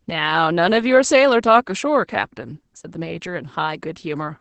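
From start to finish the speech sounds muffled, hoarse and faintly robotic, with nothing above about 8 kHz. This is Opus voice compression. The SILK coder has limited the band to wideband and coded the excitation coarsely, which fits a bitrate near 12 kbps.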